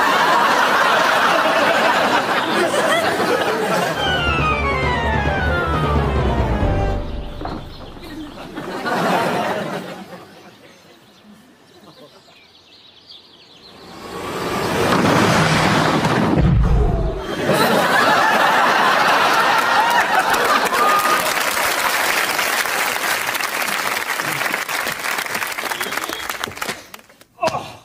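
No technical faults can be heard anywhere in the recording.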